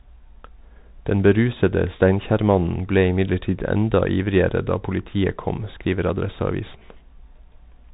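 From start to finish the speech carries Bluetooth CVSD headset codec damage, plainly audible. The one-bit delta coder, running at 64 kbps, cannot track fast, loud high-frequency movement, so sibilants turn scratchy and a granular hiss sits underneath, while nothing above 3.8 kHz survives.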